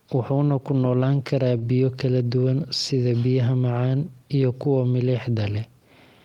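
At 1.57 to 1.64 s there is a short concealed packet loss. About 40 ms of the speech never arrived in time. The receiver filled roughly 44 ms by extending the preceding sound, then blended back. It comes across as a brief smear in the speech.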